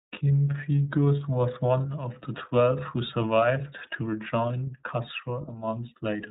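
From start to finish the speech carries iLBC codec damage, plainly audible as a rough, slightly synthetic edge. Each 30 ms frame appears coded independently, which fits the 13.33 kbps mode. A spectrogram shows nothing above 4 kHz, with the energy cut off flat at that line.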